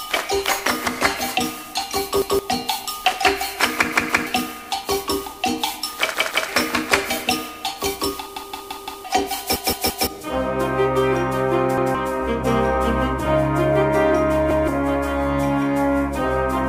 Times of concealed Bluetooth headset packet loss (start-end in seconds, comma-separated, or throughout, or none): none